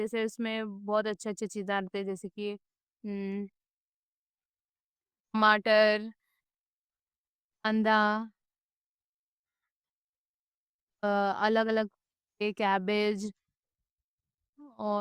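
Nothing in this speech recording stands out as a technical fault; it simply runs along without any audible glitch or break to point to.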